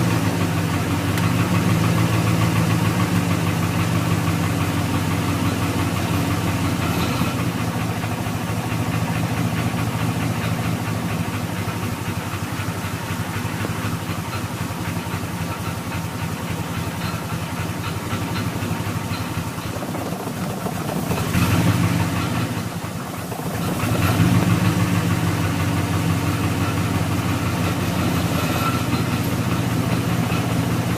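Nothing in the recording stood out as a fault on listening.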